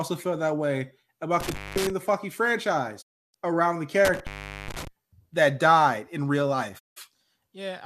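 At 1.40 s, just after "feel that way", an intermittent contact interrupts the speech. A loose plug or cable opens briefly. The line stays open for about 0.21 s within the disturbance that ends at 1.90 s. Crackle marks each edge, and faint hiss fills the gap. Speech resumes at "the fucking".

From 3.01 s to 3.36 s comes a digital broadcast dropout. The receiver lost good frames and muted. The sound fades out over 20 ms and stays silent for about 0.31 s. This fits a run of corrupted frames. Whatever was sent meanwhile is gone. Speech returns at "around the".

A second intermittent contact runs from 4.05 s to 4.87 s. Here the line stays open longer, about 0.42 s. Again crackle bounds the cut, with hiss underneath.

At 6.77 s, after "that died in real", a second digital broadcast dropout hits. It has the same 20 ms fade and lasts about 0.17 s. The signal recovers at 6.98 s.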